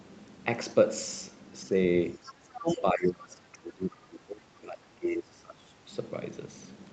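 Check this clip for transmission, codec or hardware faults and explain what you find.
Two echo-related faults show up in the middle of the speech, and they overlap around 2.5 s.

Other side's voice leaking through, 2.12 to 2.67 s: a second, fainter voice sits under the talker, roughly 20 dB down. The likely cause is far-end audio from the talker's loudspeaker reaching the microphone and surviving the echo canceller, which failed to subtract it fully. This fragment then passes through the Opus stream at 32 kbps with the rest of the audio, limited like everything else to 8 kHz.

Speech suppressed in double talk, 2.54 to 5.89 s: the talker's level sinks and recovers unevenly across about three seconds in total, at worst falling by around 25 dB. This likely happened because both ends were talking at once. Unable to separate the near voice from the loudspeaker echo, the canceller's suppressor attenuated the whole microphone signal, taking the wanted speech down with the echo.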